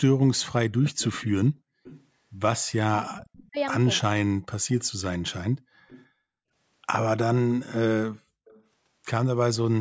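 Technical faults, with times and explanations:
0.98–1.31 s, 1.83–2.06 s, 4.79–4.84 s, 5.88–6.06 s, 8.47–8.63 s: echo leak. A faint copy of the sound trails about 326 ms behind, about 20 to 30 dB down. This is likely the far end's echo canceller letting loudspeaker pickup through. Unlike reverberation, the copy arrives at one fixed delay.
2.87–3.57 s, 4.07–5.02 s: speech suppressed in double talk. The talker dips sharply, by as much as about 40 dB, while the other side is speaking. This is likely the echo canceller mistaking overlapping speech for echo. Unlike a dropout, the loss follows the overlap.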